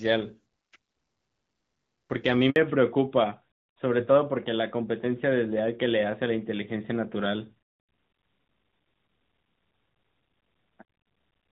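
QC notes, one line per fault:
2.50 to 2.56 s, handover gap: the audio cuts out for about 60 ms as the call is passed from one network to another. No speech frames reach the decoder while the link is re-established, so the sound falls away almost instantly and leaves a short hole of silence. Whatever was said in that window is simply missing rather than smeared or repeated, and the sound resumes once the new connection delivers frames again.
2.56 s to the end, fallback to narrowband: immediately after the gap the bandwidth collapses, with nothing left above 4 kHz for the rest of the clip. Before the switch the call carries clear wideband detail, with only light coding damage, which fits HD Voice at around 12.65 kbit/s. After it the sound points to an older narrowband codec, likely AMR-NB at about 12.2 kbit/s, so sibilants lose their upper energy and airy upper content disappears, and the speech turns duller, boxier and somewhat rougher.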